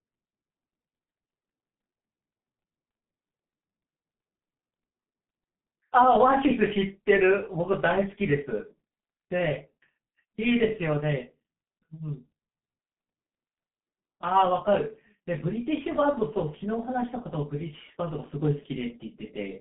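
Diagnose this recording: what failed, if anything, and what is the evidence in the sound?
The failure is at the codec stage: G.723.1 compression, heard across the whole speech clip. Nothing survives above 3.7 kHz, and the band sits near 150 Hz to 3.5 kHz. Consonants smear and the voice turns hoarse and muffled. At 6.3 kbit/s, the 30 ms frames track the voice model too coarsely.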